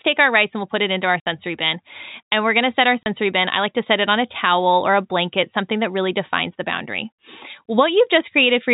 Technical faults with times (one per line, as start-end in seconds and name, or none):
1.20-1.25 packet loss filled with silence
3.03-3.06 packet loss filled with silence